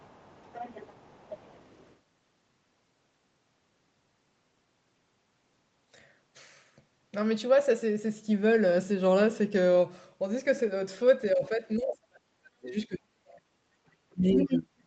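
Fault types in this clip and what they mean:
Other side's voice leaking through: A second, fainter voice sits under the speech from 0 to 1.97 s, about 20 dB down. It returns much louder, only about 5 dB below, from 14.38 to 14.59 s. This is likely loudspeaker echo the canceller missed.
Speech suppressed in double talk: The speech dips sharply from 11.32 to 13.44 s, losing roughly a second and a half in pieces. It drops again from 13.85 s to the end. The deepest cuts reach about 40 dB, likely from the canceller muting overlapping talk.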